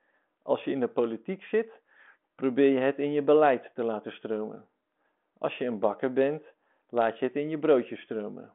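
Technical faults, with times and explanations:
Nothing stood out on listening to this speech clip.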